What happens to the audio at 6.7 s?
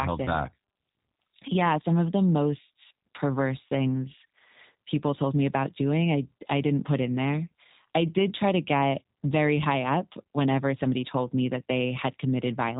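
At 6.7 s the speech carries the same G.729 codec damage that runs through the whole clip. The codec rebuilds each 10 ms frame from a vocal tract filter, a pitch predictor and a few coded pulses, so the sound is plainly rough and synthetic, which fits an 8 kbit/s codec. On a spectrogram, energy stops at a hard ceiling near 3.8 kHz with nothing above it, and the harmonics look smeared and grainy rather than cleanly striated.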